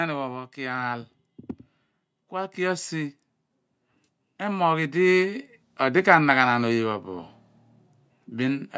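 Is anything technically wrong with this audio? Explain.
Yes. From 2.29 to 3.21 s the speech and background swell together by about 4 dB, and again from 3.96 to 6.08 s by about 5 dB. This is automatic gain rising: the call's gain control judged the input too quiet and turned it up gradually. The call microphone path tops out around 8 kHz, as expected.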